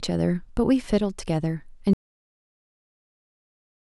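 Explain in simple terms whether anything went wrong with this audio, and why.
At 1.93 s the speech cuts out to total silence until the end: an audio dropout to silence, likely from the input signal being lost while recording continued.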